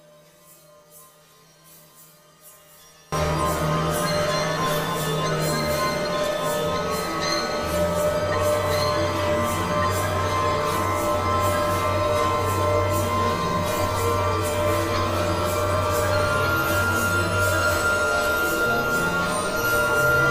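One channel was likely inverted from 0.0 to 3.12 s, so the shared centre content cancels in mono, dropping the audio by about 27 dB to a faint residue.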